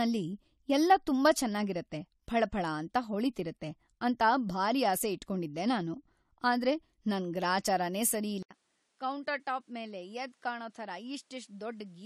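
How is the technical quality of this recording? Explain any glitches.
The quality is compromised in two ways: one problem runs through the whole clip and another begins near the end.

Across the whole recording, the speech carries the smeared, watery artefacts of a low-bitrate codec, even though the file is a high-rate MP3. That's most likely low-bitrate audio saved at a high bitrate. It sounds like something around 48 kbit/s AAC re-saved at 256 kbit/s, and the extra bitrate can't restore what was already lost.

At 8.43 s there's about an 80 ms gap. From there to the end the speech is noticeably quieter and duller, with nothing above 11.4 kHz and a new, fairly low background noise. The likely cause is the input switching to a poorer device partway through.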